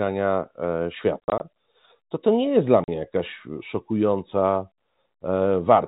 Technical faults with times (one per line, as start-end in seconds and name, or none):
1.20-1.40 packet loss filled with silence
2.84-2.88 packet loss filled with silence